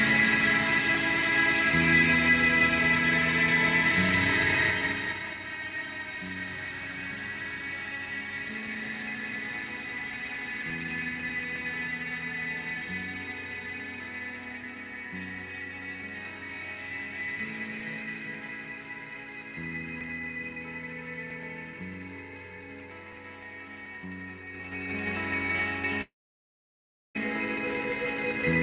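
From 26.02 s to 27.17 s, a long network dropout likely stopped packets arriving for about 1.14 s. The receiver briefly stretches the last sound into a fading buzz or hiss before near-silence takes over for roughly a second. The audio then resumes with that stretch gone, still band-limited to 4 kHz as a 64 kbps G.711 mu-law call path would leave it.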